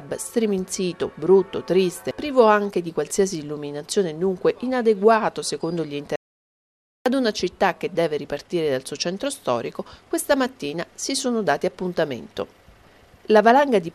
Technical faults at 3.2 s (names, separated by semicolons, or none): none